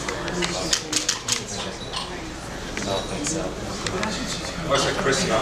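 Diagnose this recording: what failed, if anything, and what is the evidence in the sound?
Nothing failed, and the sound gives no evidence of a fault at any stage of the recording.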